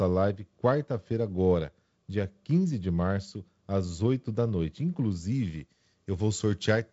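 Speech, carried over G.722 wideband telephone coding, with pre-emphasis left on from 5.32 s to the end at 6.92 s: the treble boost of a 75 µs FM curve was applied without its matching de-emphasis, lifting highs by about 13 dB at 10 kHz relative to 1 kHz. Within the codec's band, which stops near 7.7 kHz, that final stretch turns thin and bright, with exaggerated sibilance.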